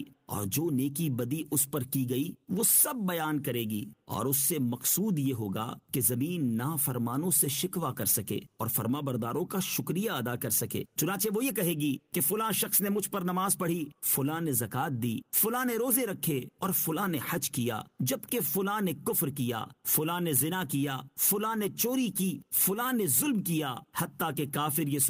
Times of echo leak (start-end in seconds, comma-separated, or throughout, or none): none